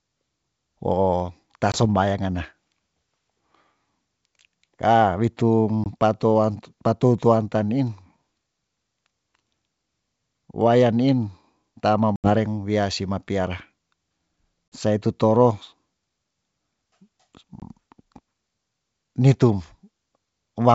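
Packet loss on an ADPCM call leaves hard-edged silent gaps at 1.72, 5.84, 12.16 (80 ms), 14.70 and 17.60 s. Afterwards the out-of-step decoder returns slightly distorted, then settles.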